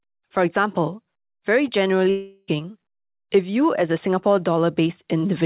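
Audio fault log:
2.10 to 2.50 s, long network dropout: for about 0.4 s the speech gives way to a synthetic continuation of the last sound, a buzz or hiss that fades across roughly 375 ms without falling fully silent. Speech then resumes further on, with about 380 ms of it gone. This is likely a run of packets that never reached the receiver, whose concealment stretched the final good audio to cover the gap, heard within the call's 4 kHz band limit.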